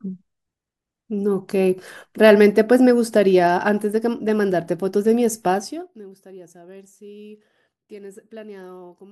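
From 5.5 to 6.06 s the speech gets pulled down by around 25 dB, but in 1 dB jumps, roughly fifty a second, with no smoothing between them. That's zipper noise: each step clicks, so you hear a fast ticking buzz riding on the fade.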